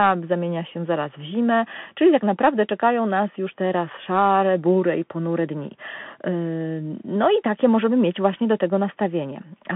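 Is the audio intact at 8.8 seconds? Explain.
No. At 8.8 s, as throughout the speech, the Bluetooth CVSD headset codec is plainly audible. The sound is squeezed into a telephone band, roughly 150 Hz to 3.4 kHz, with nothing above 3.8 kHz. Each sample is coded as one up-or-down step, which fits a 64 kbps link. Loud high sounds outrun the step, so s sounds turn scratchy over a granular hiss.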